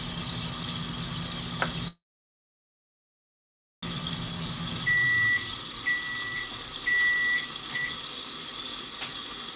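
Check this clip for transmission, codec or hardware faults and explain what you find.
Three transmission faults appear in the middle of the clip, all from the receiving end of a call. The audio is also band-limited with nothing above 4 kHz, which fits a G.711 A-law call path at 64 kbps.

Call audio freeze, 1.88 to 3.85 s: The cause is likely packets held up in transit, leaving the jitter buffer empty. For about 1.9 s the receiver had nothing to play and filled the time itself. The last sound trails off briefly, then about 1.8 s of silence follows. When the audio resumes, it continues from where it stopped, so nothing is lost, but the whole clip from here on runs nearly two seconds late.

Jitter buffer speed-up, 3.96 to 4.33 s: Once the held-back packets arrived together, the buffer was holding more than its target. To shrink that backlog, the receiver repeatedly cut out short pitch-period-sized slices, around 50 ms in total. 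The sound plays at about 113% speed with its pitch unchanged, so this stretch feels briefly hurried and compressed.

Jitter buffer slow-down, 4.37 to 4.63 s: Right after the speed-up, the buffer was judged too low, so the receiver added material back by repeating single pitch periods, 53 ms in all. Playback drops to about 82% speed at the same pitch. Sounds in this short stretch are drawn out, and the repeated cycles can give a faint warble before normal timing returns.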